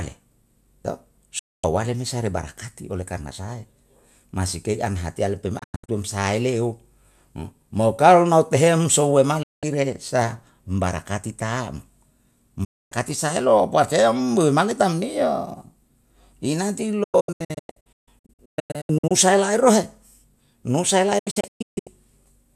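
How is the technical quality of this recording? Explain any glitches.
The recording suffers six digital broadcast dropouts. Each time, the receiver lost valid frames and muted, so the speech snaps to silence through an 8 ms fade and that stretch is gone.

At 1.39 to 1.64 s, a solid 240 ms hole falls just before "awale me se rei". At 5.59 to 5.89 s, just after "hatiya le'e pe mai", 216 ms is lost in broken holes up to 96 ms long. At 9.43 to 9.63 s there is a clean 192 ms gap. At 12.64 to 12.92 s, a 264 ms gap precedes "saelo bafe". From 17.03 to 19.11 s, the worst stretch, about 1.15 s disappears in scattered holes of up to 144 ms. From 21.19 to 21.87 s, 480 ms is lost in similar holes. The gap lengths fit roughly 24 ms broadcast frames being dropped.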